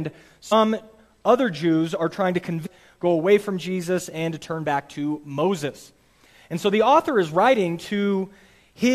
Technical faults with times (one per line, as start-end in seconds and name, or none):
0.51 damaged data in a compressed stream
2.65-2.67 damaged data in a compressed stream